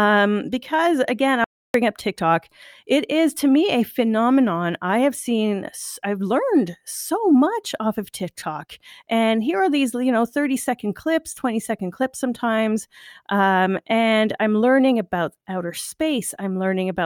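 At about 1.44 s the speech cuts out into dead silence, with no room tone at all, for roughly 0.3 s until 1.74 s. That's an audio dropout to silence, likely from the input briefly disconnecting or muting while the recorder kept writing silence, so whatever was said there is simply gone.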